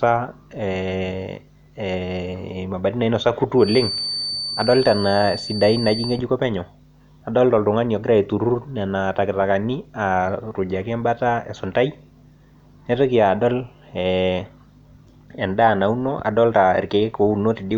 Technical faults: feedback whistle

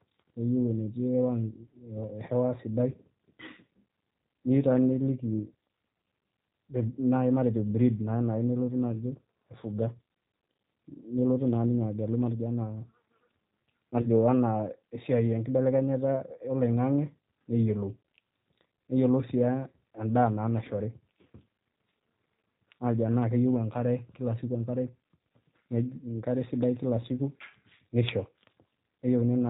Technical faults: G.729 codec; VoIP packet loss concealed by the speech codec

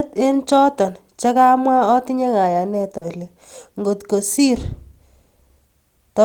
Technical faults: short concealed packet loss

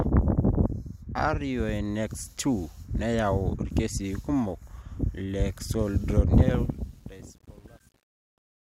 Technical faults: truncation distortion on a fade

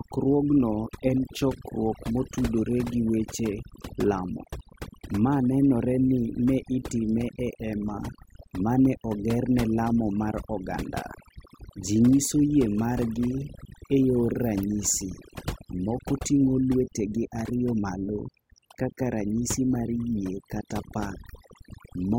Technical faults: overdone noise removal

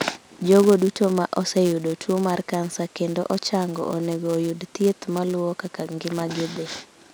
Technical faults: filter restarted on every block

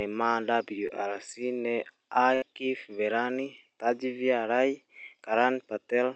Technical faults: short concealed packet loss; burst of packet loss

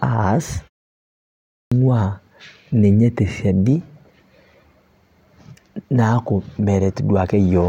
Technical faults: clipped start after a pause

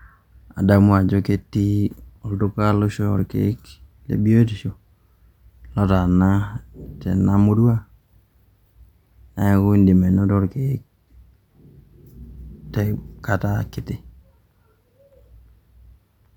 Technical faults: none

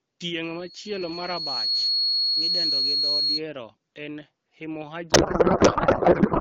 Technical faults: loudspeaker feedback squeal; codec payload misread

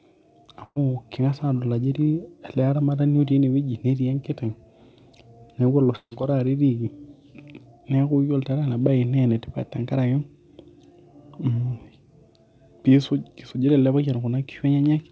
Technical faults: burst of packet loss; long network dropout

